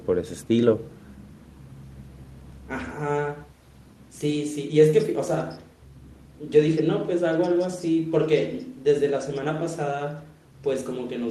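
Nothing in this speech recording stands out as a technical problem, so there's no fault to point to or explain.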